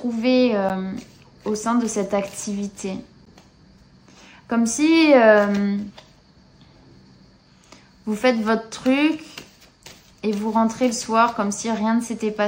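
A block of digital silence at 0.69 s and again at 3.25 s: about 11.6 ms of audio drops to silence with no fade, which fits a 512-sample buffer left unfilled in time, so each gap is heard as a tick or dip.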